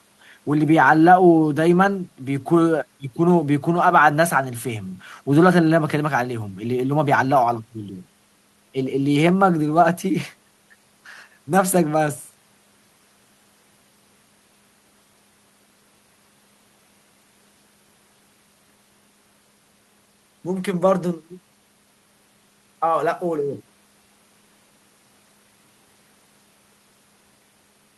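A careful listen to this speech recording turned up nothing that stood out as a technical problem.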